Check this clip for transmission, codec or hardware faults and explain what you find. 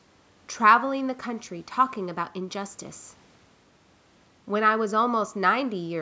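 No faults found in the speech: nothing is present above 8 kHz, consistent with call microphone processing, and the room noise sits about 39 dB below the speech.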